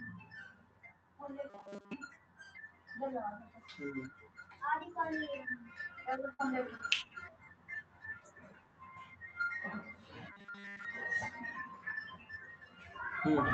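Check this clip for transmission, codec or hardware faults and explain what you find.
Yes, the speech shows four kinds of fault: two robotic stretches, and a cluster of packet-loss damage between about 6.2 and 7.5 s.

Robotic sound from repeated short buffers, 1.50 to 1.93 s and 10.32 to 10.85 s: audio arrived too seldom and playback looped a tiny slice, likely about 5 ms, which fits the rigid 200 Hz buzz. Most of the first stretch and all of the second are repeats. On a spectrogram this shows as flat, evenly spaced harmonics of 200 Hz, and the waveform shows a periodic repeat.

Lost packet rebuilt from error correction, each about 20 ms, at 6.17, 6.39, 6.47, 6.79, 6.89, 7.41 and 7.51 s: the next packet carried a low-bitrate copy that the decoder played, so there is no gap. Each spot sounds briefly grainier, with slightly smeared, noisier harmonics on a spectrogram.

Burst of packet loss, 6.33 to 6.41 s: about 60 ms of audio never arrived. 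The receiver stretched the last sound for about 56 ms while fading it into a held buzz or hiss, then jumped ahead. A spectrogram shows a flattened, fading patch, and the waveform decays before the abrupt resumption.

Short concealed packet loss, 6.77 to 6.81 s: about 20 ms went missing, and roughly 17 ms was filled by continuing the previous sound before blending back. It is heard as a quick smear or wobble, seen as a tiny frozen, blurred slice. The Opus call path caps the audio near 8 kHz.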